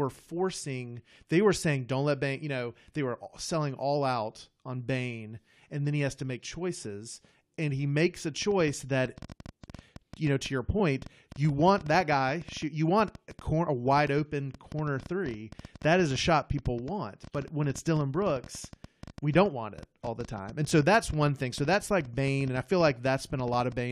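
Speech clip with two problems. At 6.37 to 6.39 s and again at 10.79 s there's a short blip from damaged data in a compressed stream: corrupted bytes make the decoder misread frames, lose sync and hunt for the next header, so the sound briefly garbles. From 8.42 s to 23.73 s a train of clicks ticks over everything, including the pauses, at about 9.3 per second with irregular spacing, around 150 in all, peaking at roughly the level of the speech itself. The pulses look much alike, so the likely cause is interference from nearby equipment or a faulty connection injecting them.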